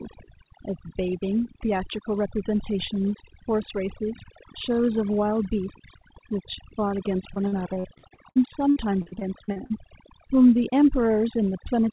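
Overdone noise removal runs through the whole of this speech recording. The suppressor pushes individual frequency bands down whenever they sit close to its noise estimate, so the quieter parts of the voice are stripped away along with the noise. The background drops and breaks up into twinkling specks. Repeated packet loss (robotic sound) occurs from 7.34 to 9.72 s, a dense run of short dropouts lasting up to about 59 ms each. Every hole is patched by stretching out the preceding sound, and roughly a quarter of the stretch is filled this way before the next hole arrives. The result is choppy audio with pieces missing. Nothing is heard above 4 kHz, which fits a narrowband G.711 call path.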